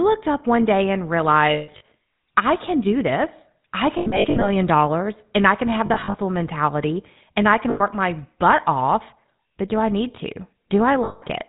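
Speech, and it's been through the GSM full-rate codec the whole way. Nothing above 4 kHz survives, and the voice has that buzzy, gravelly grain from the pulse-driven vocal-tract model, which fits the old 13 kbps coder. There are also lost GSM frames at 1.54–1.83 s (after "up one day and"), 3.98–4.49 s (after "can do this I"), 5.86–6.17 s (after "and I can have"), 7.7–7.82 s and 11.04–11.23 s. In each one the decoder keeps replaying the last good frame, so you hear a rough metallic ring. The first hit's longest gap is about 150 ms.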